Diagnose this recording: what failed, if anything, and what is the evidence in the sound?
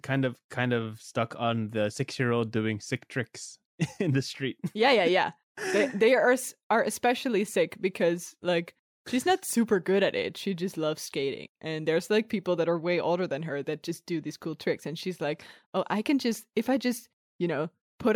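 Nothing in the speech signal points to a failure at any stage of the chain, from capture and conversion through buffering, processing, transmission and playback.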